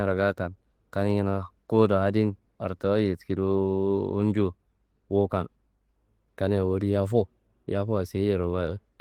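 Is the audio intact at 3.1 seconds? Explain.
Yes, at 3.1 seconds the speech plays through intact, with no dropout, click, distortion or other fault at that moment.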